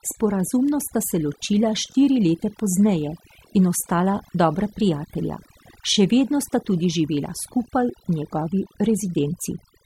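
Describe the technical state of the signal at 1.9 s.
Overlapping chunks occur at 1.92 to 1.94 s, just after "sta se ločila". The audio here was handled in blocks of about 4.0 s, and the next block begins before the previous one has finished. The overlap, roughly 21 ms of the signal, is played a second time at the join. At this moment it sounds like a brief click or hiccup in the speech, a tiny stutter where a sliver of sound repeats.

Overdone noise removal also affects this moment, as it does the whole clip. A noise reduction stage set far too aggressively pulls individual frequency bands down hard whenever they come close to its noise estimate, and quieter parts of the voice are cut along with the noise. Around 1.9 s the background drops and breaks up into twinkling, chirpy specks.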